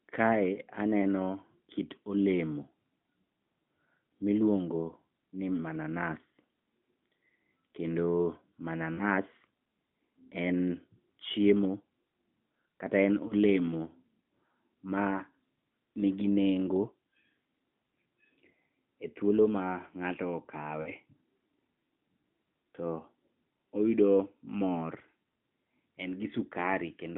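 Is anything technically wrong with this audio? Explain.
Yes. There are lost AMR speech frames at 0.54–0.58 s, 8.94–9.04 s, 13.28–13.33 s and 20.82–20.91 s. Radio errors corrupted these frames, so the decoder filled each gap by repeating the last good pitch and vocal-tract settings at falling gain. The short gaps, which fit a single 20 ms frame, give a brief dip or warble. The roughly 40 ms gaps at 8.94 s and 20.82 s smear and fade further before the speech returns weak or rough for a moment. All of this sits within the narrowband AMR line, about 150 Hz to 3.6 kHz.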